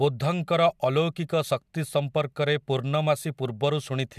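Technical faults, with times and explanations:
The speech signal carries no technical faults that can be heard at any point in the recording.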